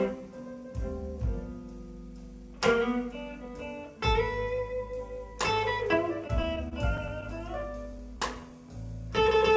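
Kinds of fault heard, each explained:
Repeated stalls (stutter): Between 6.28 and 7.24 s the audio catches seven times, each catch a short hold of the sound just heard, the longest about 25 ms, with about 78 ms filled in all and nothing actually lost. This happens when packets arrive late and the jitter buffer keeps running dry. Unlike packet loss, no content drops out. The passage just drags in small hiccups, which also sets it apart from the smooth stretching that follows.
Jitter buffer slow-down: From 7.92 to 8.50 s the audio plays at about 94% speed, stretched by about 42 ms as the receiver repeats single pitch periods or slivers of pause to rebuild its reserve. The pitch stays where it was, which separates this from a sample-rate or clock error, where slower playback would also sound lower. It lacks the discrete catches of the stutter, and the audio is simply drawn out, all within the call's 8 kHz bandwidth.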